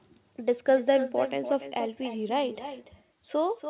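No echo canceller removes the far loudspeaker's pickup, so speech throughout repeats about a third of a second later, about 10 dB quieter and thinner.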